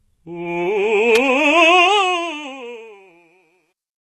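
Throughout the music there is a hard ceiling at about 12.3 kHz and a treble band that sounds synthetic, which points to HE-AAC compression, likely at a low rate, around 16 kbps. The codec carries only the lower spectrum in full and fills the top by copying lower bands upward under a coarse envelope. Here the damage is plainly audible. The top end stays bright but its harmonics do not line up with those below the crossover, so cymbal-like content sounds gritty and metallic.

At 1.15 s a sharp, very brief snap sits on top of the music, lasting barely over 10 ms. Its shape matches an electrical switching spike, likely an arc from a nearby switch, motor or static discharge picked up by the audio line. It is added on top of the signal and does not replace it. It is heard as a tight click rather than a disturbance in the music itself.

The fade-out begins at 1.64 s and runs to 4.09 s. From 1.64 s onward it carries truncation distortion on a fade, consistent with the gain stage keeping about 12 bits and adding no dither. 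As the level drops toward the smallest step, the waveform collapses into a few coarse steps. The tail grows grainy, and it is worst from 2.98 s to 4.09 s.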